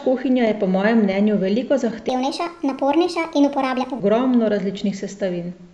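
From 2.09 s to 4.00 s the speech jumps into a wrong sample rate: samples are played faster than they were captured, with no conversion, so the speech runs about 1.38 times quicker and sits about 5.5 semitones higher, sounding chipmunk-like and hurried. The ratio fits 16 kHz material played at 22 kHz. Unlike a pitch shifter or time-stretch, which alter one property alone, here tempo and pitch rise together by the same ratio.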